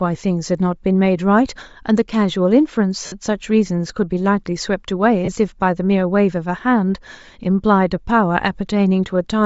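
Throughout the speech there is a breathy, grainy edge on the upper frequencies, where much of the high band sounds replaced by shaped noise rather than real detail. That character is likely Bluetooth LC3 compression. The transform coder runs short of bits and zeroes the upper spectrum, then fills it with noise. The degree of damage is plainly audible and fits a rate around 32 kbps with 10 ms frames.

From 3.06 to 3.12 s, a 60 ms stretch of lost LE Audio frames turns the sound into a noisy, smeared hold that starts to sink in level before normal audio resumes. The decoder is concealing the gap by repeating the last spectrum with randomised signs and then fading it. A second, 30 ms loss at 5.25 to 5.29 s gives a shorter smear of the same kind, consistent with about three 10 ms frames.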